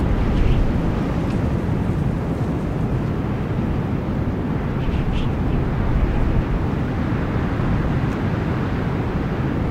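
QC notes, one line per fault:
6.74–6.82 s, chunks out of order: one 20 ms chunk arrived late and plays three chunks after its proper place, so this stretch sounds jumbled, with three hard joins. The waveform shows three abrupt seams, and the spectrogram shows a short slice displaced from its sequence.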